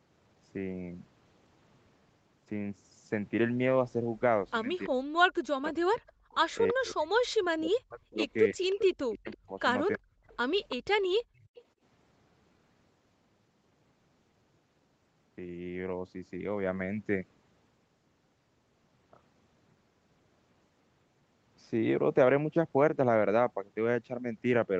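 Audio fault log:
5.52–6.07 s and 6.72–10.32 s, speech suppressed in double talk: with both ends talking at once, the echo canceller likely could not tell the near talker from the loudspeaker echo and turned everything down. The speech dips by as much as about 40 dB, for roughly 0.4 s in the first stretch and about two seconds in total across the second, so the voice thins and drops out in pieces.
5.62–6.73 s, 8.70–9.36 s, 9.93–9.98 s and 10.69–11.61 s, echo leak: the far end's loudspeaker output reached its microphone, and its canceller likely failed to remove all of it, so part of the signal came back. The result is a copy of the voice trailing 332 ms behind, heard at about 15, 10, 20 and 15 dB below the speech. The loudest return comes at 8.70 s.
11.24–11.55 s, background gated by the echo canceller: while the loudspeaker was playing, the canceller clamped the microphone hard. The room sound falls away by about 29 dB for roughly 300 ms, leaving a brief hole in the background. 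It returns once the canceller releases.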